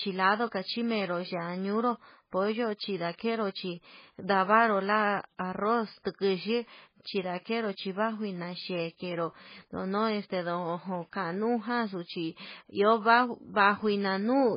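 Throughout the speech, the sound is dull and heavily smeared, with a watery, swirling texture and nothing audible above 5 kHz. The likely cause is heavy MP3 compression, at a bitrate that fits about 16 kbps, cutting the treble and letting weak frequency components flicker between frames.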